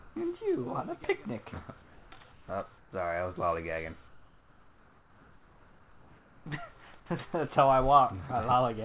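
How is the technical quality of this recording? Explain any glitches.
The recording has one recurring glitch: comfort noise in place of the background, at 0 to 0.16, 1.82 to 2.12, 2.32 to 2.48, 2.78 to 2.92 and 4.08 to 6.46 s. The sender likely stopped transmitting during quiet gaps, so the receiver generated synthetic noise. In those stretches the real background becomes flat, featureless hiss, up to about 4 dB quieter. The call path carries nothing above 4 kHz, which fits a narrowband telephone codec.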